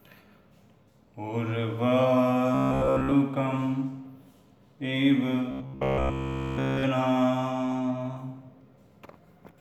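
From 2.55 to 3.13 s, and again from 5.51 to 6.83 s, the sound turns into a rigid, metallic buzz near 66.7 Hz. This is robotic sound from repeated short buffers, likely a roughly 15 ms chunk looped in place of real audio, most of the first stretch and all of the second.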